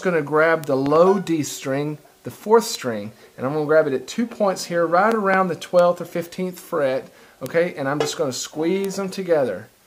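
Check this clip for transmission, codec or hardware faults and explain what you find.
Two kinds of fault are present: isolated bit error spikes and a pair of double loud pops.

Bit error spikes occur at 0.64, 2.75, 5.79, 7.46 and 8.85 s. A flipped bit throws one sample, or three at 5.79 s, to about -4 dBFS (about -10 dBFS at 5.79 s) before it snaps back. Each is a dry tick. On a waveform it shows as a lone vertical needle, and on a spectrogram as a thin full-band stripe.

Loud pops come as two pairs, from 0.86 to 0.98 s and from 5.12 to 5.36 s. The first pair peaks roughly 10 dB above the sound and the second roughly 15 dB. The likely cause is a voltage transient from a switch, plug, static or driver. Each pair is heard as a double thump over continuing audio, with a broadband smear, heaviest at low frequencies, on the spectrogram.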